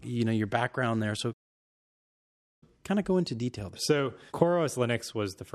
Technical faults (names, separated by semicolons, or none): playback stall